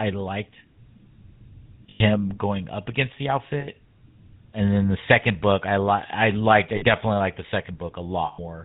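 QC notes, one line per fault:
Throughout, GSM full-rate codec. The speech is buzzy and gravelly, with plainly audible damage. Nothing comes through above 4 kHz, so the top end is dull. The coder models the vocal tract and drives it with a sparse, regular pulse train that keeps only every third excitation sample. That coarse excitation is what makes the roughness. The sound fits the 13 kbps full-rate coder.
1.9–2.01 s, 3.6–3.68 s, 6.76–6.83 s, 8.26–8.39 s, lost GSM frames. The first comes just before "going up against the", and the second just after it. The third falls between "I liked I" and "liked the". At each point the sound freezes into a rough, metallic ring. The decoder is repeating the last good frame's settings. The dropouts fit roughly five, one, three and six lost 20 ms frames.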